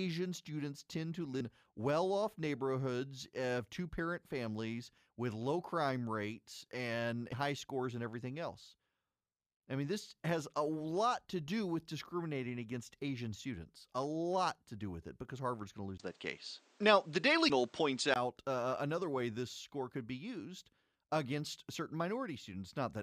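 A recording of speech carries four short blips of damaged data in a compressed stream: at 1.40 s, just after "students tend to"; at 7.32 s, after "low crime rates and"; at 17.49 s; and at 21.74 s. Each lasts under 20 ms and comes from a decoder misreading corrupt frames and resynchronising on the next header. From 15.98 s to 18.16 s, beginning after "going to" and ending before "uh another way this", the sound turns duller: nothing survives above 9.2 kHz. A 20 ms gap marks the switch, the level shifts by roughly 5 dB, and a new noise floor sits roughly 35 dB below the signal. The likely cause is the input switching to a poorer device. An equaliser or filter would change only the tone, while here bandwidth, level and background noise all change together and then revert.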